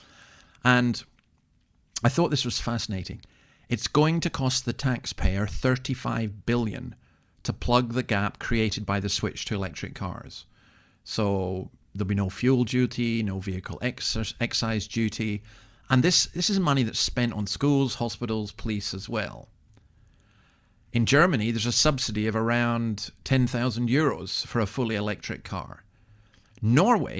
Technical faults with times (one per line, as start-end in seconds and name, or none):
none